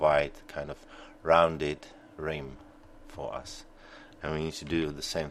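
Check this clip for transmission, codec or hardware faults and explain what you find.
Checking the clip turns up no faults to explain.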